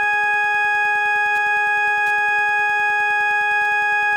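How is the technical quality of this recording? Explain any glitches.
The music carries one fault running through the whole clip: Wi-Fi interference. A nearby radio's beacons, every 102.4 ms, get rectified by the audio circuit, producing faint steady ticking about ten times a second, well below the music. A spectrogram shows evenly spaced thin vertical lines.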